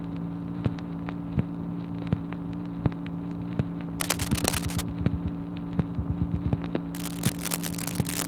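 At 4.00 s there's a burst of cable scratch noise lasting to 4.82 s, roughly as loud as the sound itself, then another from 6.94 s to the end, a bit quieter. Both are dense, ragged crackling, likely a worn cable or connector being moved.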